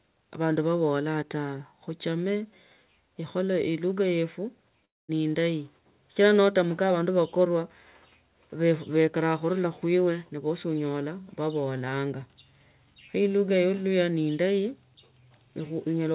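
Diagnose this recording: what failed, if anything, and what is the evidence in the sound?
Network stage: at 4.85 s the speech collapses into a fading buzz or hiss, then goes silent until 5.11 s and resumes with that stretch gone, likely a long network dropout.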